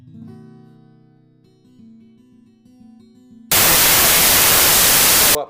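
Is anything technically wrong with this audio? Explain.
Yes, there's a wrong sample width problem from about 3.52 s to 5.35 s. The audio there was stored as packed 24-bit integers but gets read back as 32-bit ones, so each value straddles byte boundaries and mixes bytes from neighbouring samples. Only some values keep the real top bits, so you get a loud wash of noise with the original sound buried underneath, running about 1.33 times too fast and pitched up to match.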